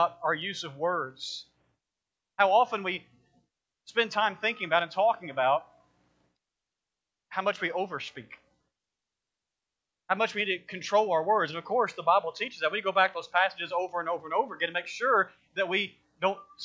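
No technical faults can be heard anywhere in this recording.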